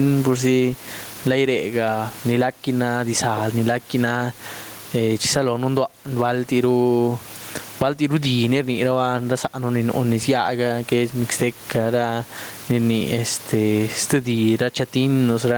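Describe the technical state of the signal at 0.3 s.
At 0.3 s the signal already shows gain pumping, which runs through the whole speech clip. Loud and soft parts are pulled closer in level and the sound is squashed, with the level swinging by something like 15 dB. The likely cause is an input gain set far too high, with a fast limiter or compressor clamping every loud syllable. The room noise sits about 31 dB below the speech. A noise gate would instead cut the background off abruptly, and ordinary room noise would stay at a constant level.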